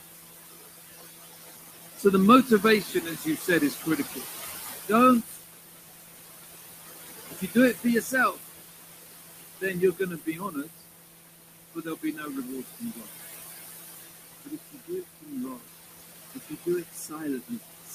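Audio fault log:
Throughout: noise suppressor artifacts. The room noise, about 9 dB below speech, is pulled down by about 18 dB between words and rises again under them.
2.46–4.22 s, 5.27–5.44 s, 7.31–8.42 s, 9.61–10.83 s, 11.74–13.08 s, 14.44–15.63 s, 16.34–17.94 s: speech cut by the noise suppressor. Quieter parts of speech are treated as noise and lowered by about 14 to 22 dB, so they sound swallowed.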